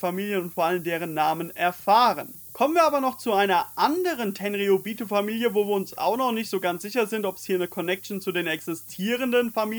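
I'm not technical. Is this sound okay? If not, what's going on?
No, there's a steady, thin hiss running the whole way through, brightest and sharpest up top. That's low bit depth with noise shaping: the audio was stored too coarsely, about 7-bit, and the resulting grit was pushed up high, where it's still quite noticeable.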